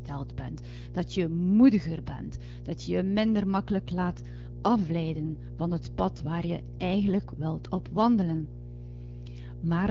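A speech clip carries mains hum for its whole length: a steady 60 Hz tone with some low harmonics, sitting roughly 15 dB below the speech. A constant tone at exactly the supply frequency points to the power line coupling into the signal, most plausibly through a ground loop or a nearby transformer. The sound also passes through an AMR wideband (HD Voice) codec, which leaves only light coding damage. At 3.65 s, after "dat je je minder", there is an AMR rate drop lasting until 7.46 s, where "op wandelen" follows. The audio band stays the same and nothing drops out, but the voice turns rougher and more synthetic for that stretch. This fits the network switching the codec from 12.65 to 8.85 kbit/s to spend bits on error protection over a weak radio link, then restoring the higher rate.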